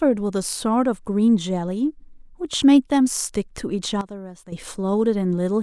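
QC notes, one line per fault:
4.01–4.52 s, sudden gain jump: speech and background noise fall together by about 12 dB in one step, then snap back at 4.52 s. There is no fade either way. Likely a digital gain setting applied between adjacent samples without a ramp.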